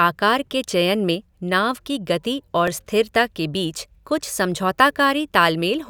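A repeated buffer occurs at 2.68 s, between "की गति और" and "स्थिरता के बीच कुछ". New audio arrived late, so the device replayed its last block once. The repeat is only a few milliseconds long, which fits a 5 ms buffer, and it is heard as a click or brief buzz rather than a stutter.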